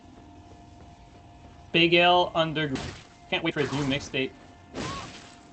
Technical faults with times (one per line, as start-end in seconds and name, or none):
2.75-2.77 skip ahead
2.91-5.21 jitter buffer speed-up